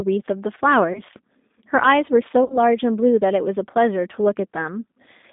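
Throughout, the speech carries G.729 codec damage: the band is confined to roughly 200 Hz to 3.7 kHz, and the plainly rough, synthetic texture fits 8 kbit/s G.729A coding, which rebuilds each short frame from a vocal tract filter, a pitch predictor and a few excitation pulses.

From 0.93 to 1.01 s, VoIP packet loss concealed by the speech codec fills a gap of about 20 ms, consistent with one lost packet. The decoder extends its last pitch and filter with falling gain, so the speech is briefly stretched and fades before recovering. A larger gap of about 60 ms, pointing to three consecutive packets, is concealed between 2.44 and 2.60 s. The stretched, fading sound is longer here, and because each frame is predicted from the previous one, the speech stays weakened or distorted past the end of the gap.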